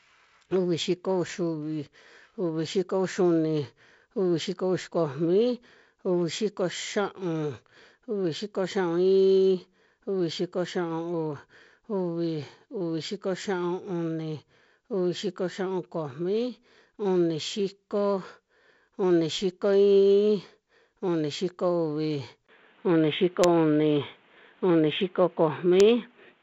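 At 22.47 s the speech drops out for about 20 ms and then returns dull and boxy until the end, most likely an input switched to a poorer device. The band now stops at 3.8 kHz rather than 7.7 kHz, the level shifts by about 5 dB, and a new noise floor sits roughly 40 dB down. That changed noise and level is what separates it from a simple filtering or codec change.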